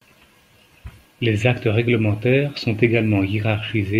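Listening closely to the speech, nothing stood out as a technical problem at any point.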